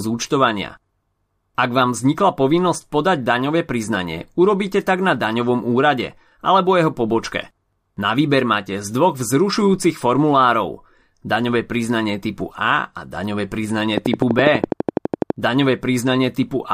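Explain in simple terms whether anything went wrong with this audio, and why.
Something in the recording chain, likely electrical interference from nearby equipment or a faulty connection or power supply, began injecting short pulses into the signal. Right after the words "a daňové", from 13.98 to 15.31 seconds, this produces a train of clicks: about fifteen sharp ticks, each sounding much the same and arriving at a steady rate of about 12 per second. The ticking sits loudly on top of the speech and carries on through the pauses.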